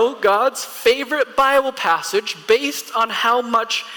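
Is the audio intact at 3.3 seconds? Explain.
Yes, the audio at 3.3 seconds is intact, with no dropout, click, distortion or other fault at that point.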